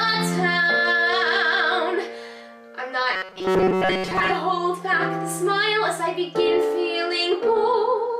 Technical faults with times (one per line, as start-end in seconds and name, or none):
3.13-4.31 robotic sound from repeated short buffers